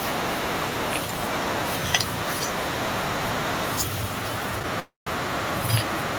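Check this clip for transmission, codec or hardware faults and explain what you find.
One fault, a call audio freeze, between 4.80 and 5.08 s. The jitter buffer likely ran dry while packets were delayed, so the last sound was stretched into a fading buzz, then silence for about 150 ms. Unlike packet loss, nothing is skipped: speech resumes exactly where it stopped, about 267 ms late.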